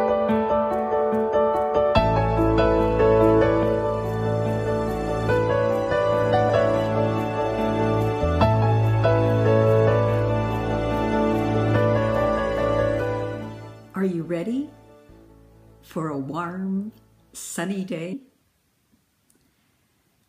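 Compressed frames skipped: whole blocks of encoded audio never reached the output, so playback jumps ahead. At 6.48 s roughly a fifth of a second vanishes, and at 18.12 s about a tenth.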